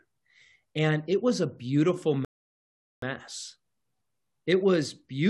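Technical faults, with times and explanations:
2.25–3.02 s, rebuffering stall: right after "it was a beautiful" the speech stops dead into silence for about 0.78 s, then carries on from the exact point where it broke off. The player had used up all the audio it had downloaded and waited for more before continuing. What sets it apart from a dropout or packet loss is that no part of the speech is skipped or replaced. The gap only adds time, so the clip runs longer.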